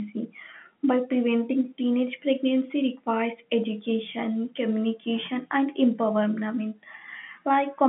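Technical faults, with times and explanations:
No technical faults are heard.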